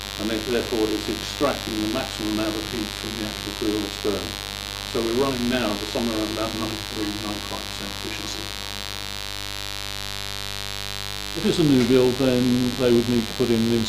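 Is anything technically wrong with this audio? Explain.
Yes, there's one problem. Mains buzz runs under the whole clip, a steady, raspy rasp sitting only about 10 dB below the wanted sound. Something like a dimmer, rectifier or poor shielding is injecting sharp spikes twice per 50 Hz cycle, so the harmonics climb well into the kilohertz range.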